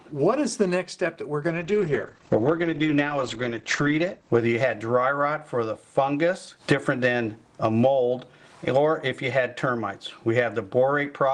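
From 1.49 to 5.5 s, a call bitrate drop coarsens the coding and cuts bandwidth from 20 kHz to 8 kHz, muffling the sound; this fits roughly 13 kbps.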